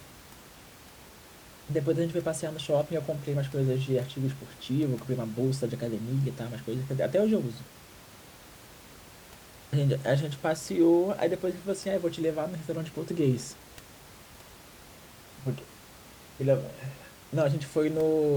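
Nothing stood out on listening to this speech, and the room noise, about 22 dB below the voice, belongs to the recording space rather than to any fault in the system.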